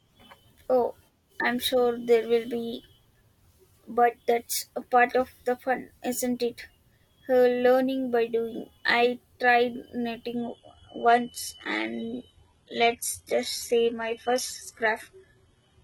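At 10.36 s the speech suddenly drops in quality and stays that way to the end, with no gap at the switch. That's an adaptive stream falling back to a lower bitrate when the connection slowed. Nothing remains above about 11.8 kHz, and codec artefacts rise. It sounds like a jump from a clean stream near 96 kbit/s down to a low-rate HE-AAC version around 16 kbit/s.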